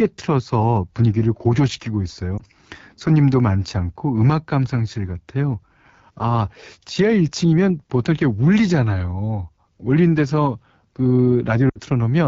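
Throughout, the speech carries AMR wideband (HD Voice) codec damage that is plainly audible. At 8.85 kbit/s, one of the codec's two lowest rates, the pulse-driven vocal tract model has too few bits to follow the voice closely, so it sounds rough and raspy. On a spectrogram, detail stops near 6.4 kHz, with a band of smooth, shaped noise filling 6.4 to 7 kHz instead of true harmonics.

From 2.38 to 2.42 s there are lost AMR speech frames. About 20 ms of audio failed to arrive intact, which fits a single dropped frame. The decoder replayed the last good pitch and vocal tract settings at reduced gain, giving a brief dip or warble. The waveform shows a short sag in amplitude, and the spectrogram shows a momentary smearing of the harmonics.

From 11.69 to 11.77 s a longer gap of about 60 ms points to three consecutive lost frames. In wideband the concealment fades to near silence within two frames. 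The waveform shows a narrow near-flat gap, and the spectrogram a vertical band of missing energy. The voice then returns weak or rough for a moment.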